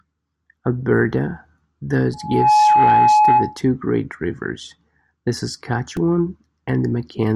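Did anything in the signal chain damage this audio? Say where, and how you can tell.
Yes, two problems. The first is a loudspeaker feedback squeal between 2.13 and 3.61 s. It's acoustic, a loop between the playback speaker and the mic. A steady 845 Hz tone climbs out of the speech in a few tenths of a second and then sits on top of it at about 10 dB louder. That single-pitch swell tells you the loop gain went past one at that frequency, so the tone kept feeding itself.

The second is a repeated buffer at 5.97 s, which puts it in the driver or buffer stage. You hear a tiny click or buzz rather than a real stutter. A 2.67 ms slice played two extra times, back to back with hard joins, because fresh audio didn't show up in time and the device looped what it had. That chunk length fits a 128-sample buffer, and the speech carries on afterwards with next to nothing missing.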